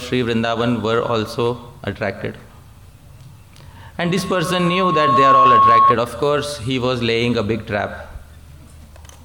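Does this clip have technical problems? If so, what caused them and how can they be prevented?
Yes. From 4.04 s to 5.94 s a single tone at 1.1 kHz rises out of the sound, swelling over about a second and a half into a piercing whine that ends up roughly 10 dB louder than the rest of the audio. This is loudspeaker feedback squeal: the microphone hears the speaker it drives, and at 1.1 kHz the loop gain exceeds one, so that tone keeps growing. Lowering gain, moving the microphone away from the speaker, or notching 1.1 kHz prevents it.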